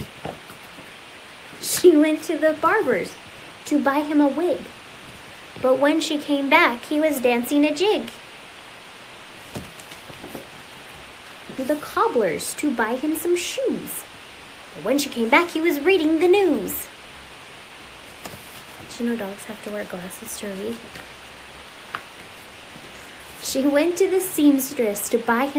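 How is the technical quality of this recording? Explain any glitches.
The recording has two related timing faults close together near the middle.

Skip ahead, 11.57–11.59 s: about a second of audio never reached playback, dropped in transit or discarded when an overfull jitter buffer already held later material. The sound jumps forward with no gap, the two sides butted almost directly together.

Jitter buffer speed-up, 11.70–14.09 s: the receiver was still holding more audio than its target, so it repeatedly trimmed short pitch-period slices, removing roughly a tenth of a second. Playback runs about 5% fast at unchanged pitch and sounds slightly hurried.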